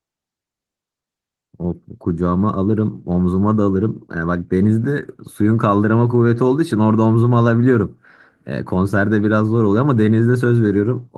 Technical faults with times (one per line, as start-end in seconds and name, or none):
none